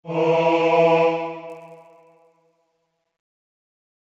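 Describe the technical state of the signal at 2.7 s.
At 2.7 s the signal carries a resampler restarted on every block fault, running from 1.49 s through to the end of the clip. The 16 kHz to 48 kHz conversion is handled in isolated 10 ms blocks, so each block's edges are interpolated without the true neighbouring samples and pick up a small discontinuity. Repeating every 10 ms, these errors merge into a 100 Hz buzz riding on the sound, audible only while signal is present.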